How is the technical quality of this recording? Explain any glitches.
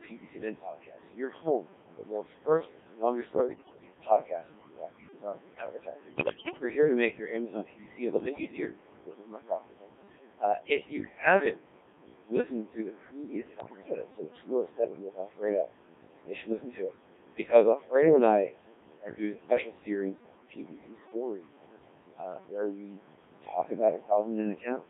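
The technical quality is poor. A very low-rate vocoder and an aggressive noise suppressor shape the whole recording, and it has several bursts of radio bit errors.

Codec 2 vocoder, throughout: The speech passes through Codec 2. At this heavy level of damage the result fits its 1.3 kbit/s mode. The codec sends only pitch, voicing, level and a rough spectral outline per frame, and the decoder rebuilds the speech from sine waves rather than keeping the waveform. The speech therefore sounds buzzy and robotic. The band runs only from 150 Hz to 3.6 kHz, which removes depth and air.

Noise suppressor artifacts, throughout: A suppressor pulls down the bands it treats as steady background, by up to about 21 dB. It works frame by frame. The room noise sits about 9 dB under the speech. That noise dips in the gaps and swells back under each phrase.

Speech cut by the noise suppressor, 0.03 to 11.59 s, 16.27 to 17.93 s, 18.47 to 21.63 s and 22.16 to 24.84 s: The suppressor misjudges parts of the speech as noise and turns them down with the background, by up to about 21 to 22 dB. 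The opening stretch is the worst, with roughly five seconds affected. In the later stretches, about half a second to a second and a half is hit each time. Soft consonants, word endings and quieter phrases sound swallowed or faint.

Bit errors on digital voice radio, 3.32 to 3.94 s, 6.16 to 6.63 s, 8.20 to 8.52 s and 13.60 to 13.95 s: Flipped bits reach the decoder. The error rate is around a tenth of all bits, and worst near 6.2 s. Each bit in this low-rate scheme steers the pitch, level or tone colour of a whole frame. Within these bursts the speech lurches in pitch and loudness and dissolves into bleeps, warbles and garbled robotic sound.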